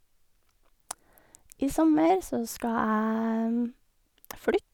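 Nothing stood out on listening to this recording of speech.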